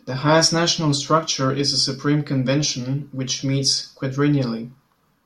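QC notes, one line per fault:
Nothing stood out on listening.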